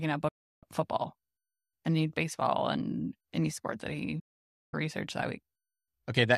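At 0.28 s the speech drops out with a quick fade of about 8 ms and stays silent until 0.63 s, a digital broadcast dropout where the receiver muted after losing good frames; the gap fits roughly 14 frames of 24 ms. It happens again from 4.19 to 4.74 s, right after "and any sport that", returning at "research that", about half a second gone, the length of around 22 such frames. Whatever was said in those gaps simply never arrives.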